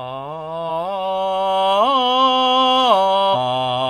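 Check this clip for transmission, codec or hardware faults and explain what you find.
One codec fault is present in this music clip. From 3.30 to 3.35 s there is damaged data in the compressed stream: a stretch of the encoded file arrived corrupted, so the decoder could not interpret those frames correctly, lost frame sync and had to hunt for the next valid header before resuming. The result is a brief, roughly 50 ms disturbance in the music, heard as a chirp, squawk, click or short hole.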